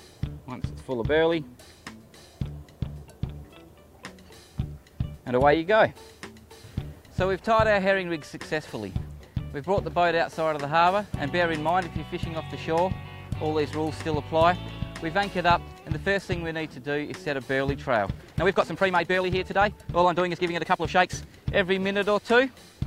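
From 18.09 to 21.27 s, a time-stretched section plays about 1.44 times faster at unchanged pitch. It sounds rushed, likely from software dropping short pieces.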